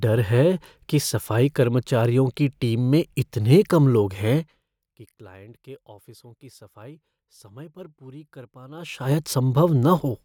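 Speech with zipper noise from 8.70 to 9.13 s, just after "समय पर पूरी कर": a level change of around 25 dB is applied in unsmoothed 2 dB steps, roughly forty per second, so each jump clicks and the move sounds like a rapid ticking zip.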